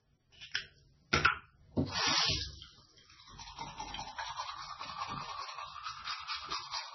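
From the first moment to the end, the top of the sound stops dead at about 5.9 kHz, and the remaining detail has a watery, swirling quality, with chirpy artefacts flickering in and out and transients smearing. That's likely heavy MP3 compression at a very low bitrate, something around 16 kbps. With so few bits, the encoder lopped off the treble outright and kept dropping quieter frequency bands, letting them pop back frame by frame.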